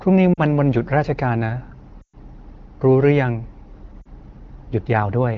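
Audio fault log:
0.34–0.41 s, 2.01–2.16 s, 4.01–4.07 s: lost AMR speech frames. The first and last gaps last about 40 ms, which fits two 20 ms frames. The middle one lasts 120 ms, which fits six. Unlike a hard dropout, the sound doesn't cut straight to silence. The wideband decoder holds the last pitch and vocal tract settings with falling gain. At 2.01 s the sound drops to near silence within two frames, and then returns weak or rough for a moment.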